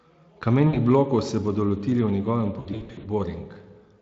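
At 0.67–0.77 s and again 2.59–3.08 s, VoIP packet loss concealed by the speech codec: lost packets (60 ms, then 280 ms scattered) get extrapolated into a fading buzz, showing as smeared, flat, decaying harmonics.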